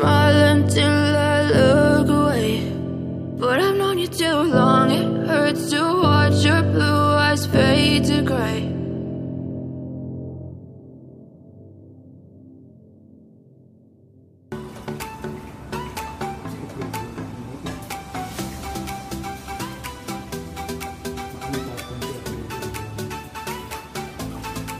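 No technical faults can be heard anywhere in the recording; the signal stays steady and intact throughout.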